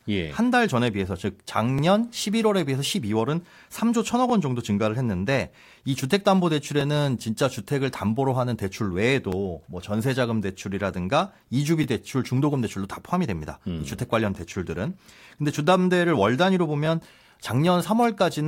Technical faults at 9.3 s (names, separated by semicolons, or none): overlapping chunks